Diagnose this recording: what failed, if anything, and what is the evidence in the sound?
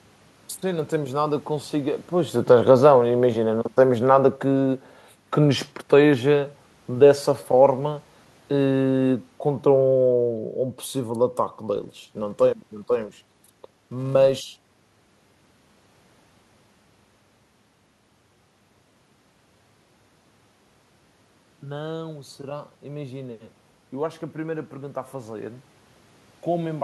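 Call processing, automatic gain falling: from 2.42 to 4.75 s the speech and the room noise sink together by about 3 dB over roughly two seconds. Just before this, around 2 s, the talker's level changes at the microphone. The gain control read the input as too loud and pulled its gain down gradually. That the background drops along with the voice shows the change is in the processing, not at the source.

Call processing, filter restarted on every block: from 11.76 to 14.71 s a steady buzz at 375 Hz sits under the speech. It grows and fades with the speech level. A filter here is losing its state between blocks and starting each from silence, so every block opens with a small transient. A 375 Hz repeat rate fits a 128-sample block, and those transients fuse into the buzz.

Call processing, automatic gain rising: around 20.5 s the talker moves and the input falls by about 11 dB. From 21.62 to 25.56 s the gain control compensates, raising speech and room noise together by about 5 dB over nearly four seconds. 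The shared swell of voice and background is the signature of gain being added after the microphone. The slow ramp reflects the controller's deliberate time constant.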